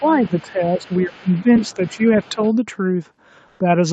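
Right from the start, 0 to 0.51 s and again 0.81 to 2.52 s, a faint second voice sits underneath, roughly 20 to 25 dB down. That's the other side's voice leaking through, most likely loudspeaker echo the canceller didn't fully remove from the mic.

Over the same stretch the main talker keeps ducking: briefly at 0 to 0.04 s, then 0.27 to 0.9 s, 1.06 to 2.01 s (the deepest, about 20 dB down) and 2.3 to 2.39 s. This is speech suppressed in double talk, likely the canceller pulling everything down while both sides talk.

Near the end, 3.47 to 3.59 s, the real room tone gets swapped for 120 ms of flat, featureless hiss, about 2 dB quieter. That's comfort noise in place of the background, likely Opus DTX filling a pause.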